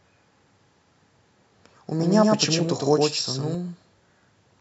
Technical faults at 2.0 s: doubled audio track

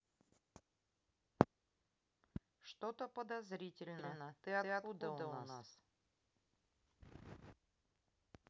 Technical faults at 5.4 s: doubled audio track

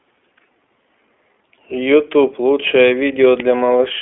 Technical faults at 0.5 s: iLBC codec

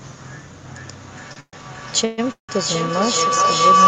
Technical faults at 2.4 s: feedback howl; call audio freeze

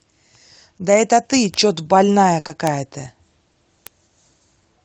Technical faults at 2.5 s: burst of packet loss; short concealed packet loss

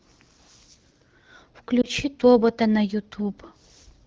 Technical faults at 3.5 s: none

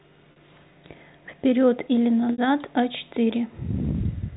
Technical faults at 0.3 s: packet loss with pitch repetition

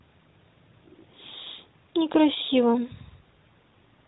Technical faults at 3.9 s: none

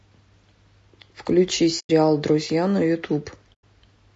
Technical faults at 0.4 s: low-delay AAC compression

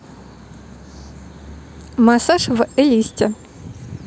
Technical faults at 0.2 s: none

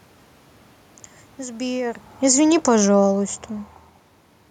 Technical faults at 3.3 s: automatic gain falling

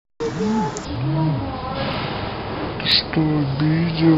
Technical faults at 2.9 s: section at the wrong speed; audio missing between chunks

